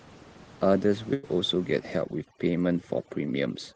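At 1.13 to 1.25 s a burst of packet loss breaks the speech. About 100 ms of audio never arrived, and the receiver bridged roughly 96 ms by extending the last sound and fading it. Unlike a simple dropout to silence, this gives a held, decaying sound, and speech then resumes further along with that stretch missing.

From 1.37 s to the end, overdone noise removal takes hold. The room noise, about 21 dB below the speech, is stripped so hard that quiet parts of the voice are cut along with it. That leaves near-silent gaps sprinkled with twinkling specks. Low-bitrate coding can also sound thin, but here the giveaway is the background vanishing into sparkling silence.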